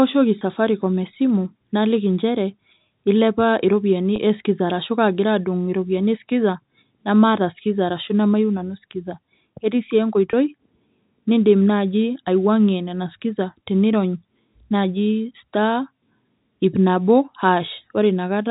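A speech recording over a G.711 telephone path, band-limited to 4 kHz, has three brief dropouts from packet loss with pitch repetition, at 0.39–0.41 s (before "safaricom esimu naliki injere"), 4.16–4.18 s (between "ilepa iropiyiani" and "eskiza arashu kaagira"), and 10.31–10.33 s. Each bridges about 20 ms, consistent with two 10 ms packets, by repeating the last pitch period, giving a momentary held, buzzy tone.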